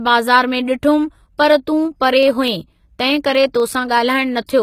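Throughout the speech, s sounds are gritty and metallic, and the spectrogram shows a flat ceiling at 14.9 kHz. This is likely HE-AAC compression at a low bitrate, around 20 kbps. From 1.85 to 4.47 s, periodic USB or driver dropouts skip tiny slivers every 0.125 s. The result is about twenty regular ticks, seen as evenly spaced waveform jumps and thin vertical spectrogram lines.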